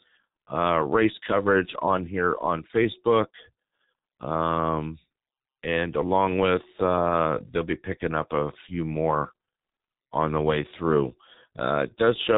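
Low-bitrate coding from the G.723.1 codec runs through the whole clip, with damage that points to its 6.3 kbit/s mode. The speech is cut into 30 ms frames and rebuilt from a coarse vocal model that updates slowly, with nothing kept above 3.8 kHz. The result is heavily muffled and hoarse speech whose consonants smear together, losing the crisp edges of sibilants and stops.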